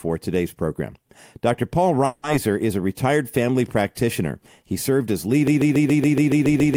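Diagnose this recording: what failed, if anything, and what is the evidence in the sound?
Two things went wrong here, both downstream of the source. At 2.05 s there's a call audio freeze lasting until about 2.26 s. The sound holds its last bit as a fading buzz for roughly 180 ms, then picks up right where it left off with nothing skipped. Everything after that runs 180 ms late. That points to the network side: packets likely held up in transit, so the jitter buffer ran dry and the receiver padded the gap.

From 5.47 s to the very end there's a broken-record loop. A fragment about 0.14 s long repeats exactly, back to back, with no break. Whatever should have played in those last seconds never arrives. That's a stalled stage in playback or the stream, most likely the encoder or player getting stuck and resending the last chunk it had buffered instead of moving on to new audio.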